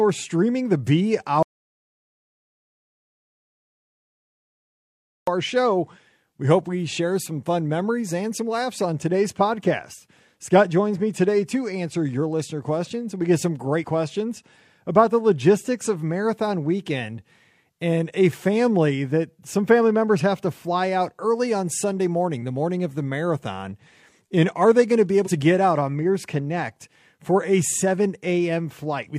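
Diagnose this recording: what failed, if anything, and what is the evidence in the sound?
Audio dropout to silence, 1.43 to 5.27 s: the speech stops dead into silence for about 3.8 s, most likely because the input was lost while zeros kept being written.

Damaged data in a compressed stream, 13.80 to 13.84 s after "questions we get some" and 25.22 to 25.29 s after "they going to be": brief glitches where the decoder misreads corrupted frames and resyncs.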